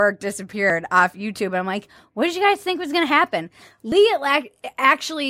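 At 0.70 s and again at 3.92 s the speech jumps forward, the sound on either side joined with no gap. Each is likely a dropped buffer (overrun): samples were overwritten before being read, so roughly 20 ms is missing. On a waveform the trace changes abruptly at each point. A spectrogram shows a thin vertical broadband line where the two edges meet.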